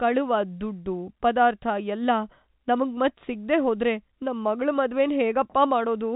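No technical faults can be heard in this speech clip. It carries the narrow band of G.711 telephone coding, with nothing above about 3.8 kHz and only a faint trace of the coding itself.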